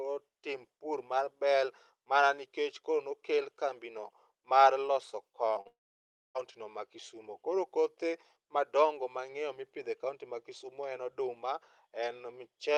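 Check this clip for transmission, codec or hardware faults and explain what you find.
Three transmission faults cluster around 5.5 to 6.4 seconds, all from packets failing to arrive over the call link.

Short concealed packet loss, 5.53 to 5.57 s and 5.61 to 5.67 s: about 20 ms and then 40 ms of audio arrived too late. The decoder extended the preceding sound, heard as brief smears.

Long network dropout, 5.67 to 6.37 s: the sound continues as a fading buzz, goes silent for roughly 0.6 s, then resumes further on, likely because incoming audio stopped for about 0.7 s.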